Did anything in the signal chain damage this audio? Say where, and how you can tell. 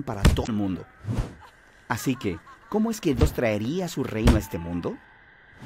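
Yes: damaged data in a compressed stream, at 0.43–0.49 s and 3.18–3.23 s, each a brief glitch. Corrupted bytes in the encoded data made the decoder misread frames, lose sync and hunt for the next frame header, a fault in the compressed stream.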